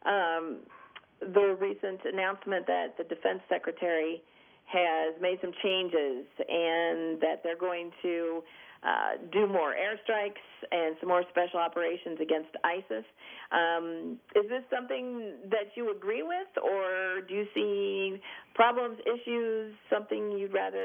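From 5.70 s to the end, pre-emphasis is left on: a treble boost that fits a 50 µs FM curve and was never undone by its matching de-emphasis, lifting 10 kHz about 11 dB over 1 kHz. It sounds thin, bright and sibilant, and a spectrogram shows the upper bands abruptly denser from 5.70 s.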